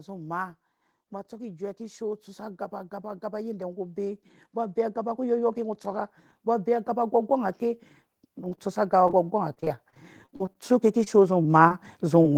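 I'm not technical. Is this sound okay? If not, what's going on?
No, it has a few problems, mostly from the call connection and one from the volume control.

First, automatic gain rising. From 1.29 to 7.89 s, and again from 8.73 s to the end, the volume control decides things are too quiet and turns itself up bit by bit. You hear the speech and the room behind it swell together over several seconds, rather than a sudden jump.

Then short concealed packet loss. Tiny chunks of the speech, about 20 ms each, never arrived in time, at 8.49–8.53, 11.04–11.08, 11.42–11.46, 11.68–11.72 and 12.22–12.26 s. Each time the receiving end covered the hole by carrying on the last sound for a moment, then blended back in. Listen for a quick smear or wobble.

Right after the first of those, at 8.55–8.59 s, there's a short stall from a late packet. Here nothing was actually lost, a piece just showed up late. 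The receiver held the last sound for about 19 ms while it waited, then picked up exactly where it left off. It comes across as a sound dragged out a hair too long, maybe with a faint buzz.

The roughest part is 9.08 to 10.58 s: repeated packet loss, the robotic sound. Thirteen little gaps land one after another, the longest about 38 ms, and roughly a sixth of that stretch is patched-in filler. Because the next hole follows soon after each patch, the speech turns choppy, with bits of it missing.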